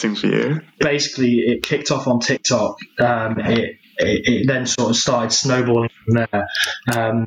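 Gain pumping runs through the whole clip, with the level swinging by something like 20 dB. The likely cause is input gain set far too high for the microphone, so a fast limiter or compressor keeps clamping down on each peak and releasing in between. Loud and soft passages sit unnaturally close in level, leaving the sound squashed and breathing.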